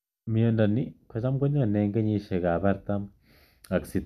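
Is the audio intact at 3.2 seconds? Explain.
Yes, at 3.2 seconds the speech plays through cleanly with no dropout, click or other technical fault.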